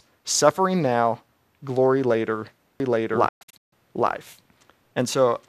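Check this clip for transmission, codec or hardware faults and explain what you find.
Two faults are present, and they overlap in the second half of the speech.

From 2.8 s, just after "suffering now glory later", to the end, there is a doubled audio track. A second copy, likely captured again through a slower path, is mixed in roughly 0.7 s behind at about the same level. It starts abruptly and has no decay or room colour, so the speech sounds like two overlapping full-band copies.

Between 3.28 s and 3.73 s comes a digital broadcast dropout. The receiver stopped getting valid frames and muted until good ones returned, fading out over 8 ms each time. About 336 ms of sound is lost in several holes spread over 432 ms, the longest lasting 144 ms.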